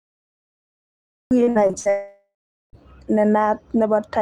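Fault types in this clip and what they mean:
Cut-off start: The recording began late. Digital silence runs from 0 to 1.31 s, and then the speech enters abruptly mid-sound with no natural onset or fade-in. The start of that utterance was never captured, so it begins partway through.
Repeated packet loss (robotic sound): Between 1.43 and 1.87 s, audio drops out in five short holes, the longest 60 ms. Each is patched by stretching the preceding sound, so about 45% of that span is filler, giving choppy speech with pieces missing.
Long network dropout: From 1.89 to 2.75 s, about 840 ms of speech is missing. The last sound is extended as a fading buzz or hiss, then the final 430 ms is plain silence before speech resumes without the lost part, likely a stall in network delivery.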